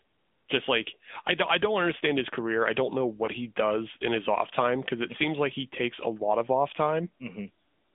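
Throughout, the speech carries AMR narrowband mobile codec damage, and it is plainly audible. The band runs only from about 200 Hz to 3.6 kHz. The voice sounds buzzy and synthetic. That fits the 10.2 kbps AMR-NB mode, where a pitch predictor and sparse pulses rebuild speech.

From 3.26 to 3.30 s, between "career I don't know" and "he does in his", one AMR speech frame is lost. That is 20 ms of speech. The decoder fills the gap by repeating the last good settings at falling gain. It is heard as a brief dip or warble.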